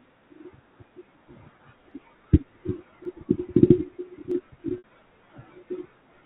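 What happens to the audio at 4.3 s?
At 4.32 s the stream most likely loses a fraction of a millisecond of samples, a case of dropped samples. The waveform leaps from one value straight to a later one with nothing between, too brief to remove any of the speech, so what you hear is a single sharp click. On a spectrogram it shows as a thin vertical line that runs up to the 4 kHz ceiling set by the G.711 telephone coding.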